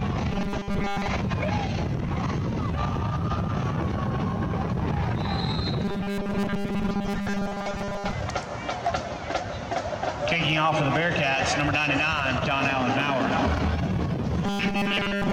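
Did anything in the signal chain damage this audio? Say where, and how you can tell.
Yes. Robotic sound from repeated short buffers appears at 0.32–1.07 s, 5.85–8.13 s and 14.46–15.33 s. A rigid, metallic buzz fixed at 200 Hz sits on the sound, meaning a 5 ms slice is repeated, standing in for most of the real audio. This likely comes from buffer underruns at the driver or buffer stage. A codec's warble wanders in pitch, and network loss leaves gaps, but here the pitch stays locked and nothing drops out.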